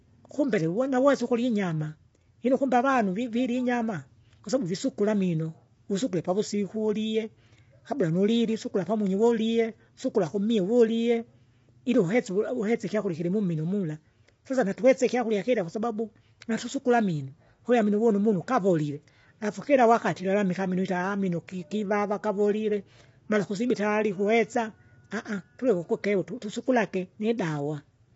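Low-delay AAC compression throughout: rough, grainy speech with nothing above 7.7 kHz, likely AAC-ELD's short frames starved of bits, fitting roughly 24 kbps.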